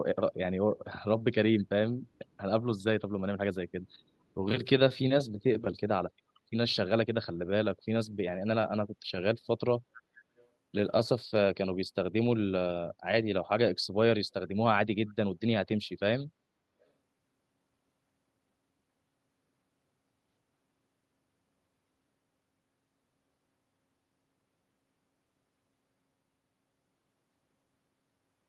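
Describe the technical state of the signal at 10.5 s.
Just before that point, from 10.37 to 10.46 s, there is a brief echo leak: a faint, delayed copy of the speech arriving about 439 ms late, far below the direct level. Its likely cause is a far-end loudspeaker whose echo canceller let a fragment through.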